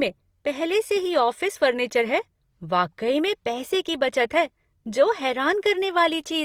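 Speech clip with Opus compression damage throughout: the sound is plainly rough and grainy, with noisy texture replacing clean harmonics, likely from CELT-mode encoding at a low rate consistent with about 24 kbps. A spectrogram shows grainy, noise-filled bands rather than holes, extending to 20.4 kHz.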